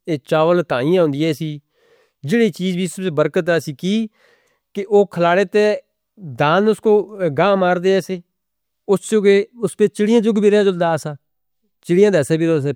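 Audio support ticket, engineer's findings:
Listened through the speech recording: nothing stood out, no faults to report.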